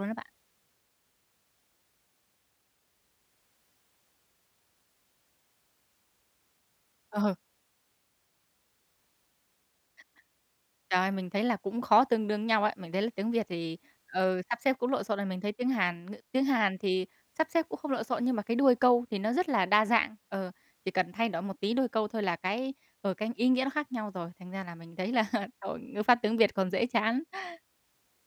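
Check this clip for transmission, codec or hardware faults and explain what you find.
Nothing faulty turns up anywhere in this speech recording. No event in it needs explaining.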